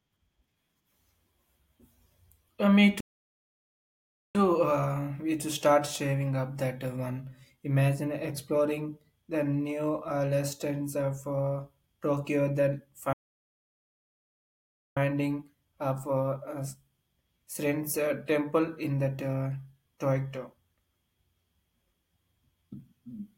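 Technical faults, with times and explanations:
3.00–4.35 s and 13.13–14.97 s, playback stall: the speech cuts to silence for about 1.3 s and 1.8 s, then resumes, likely because the player ran short of buffered data.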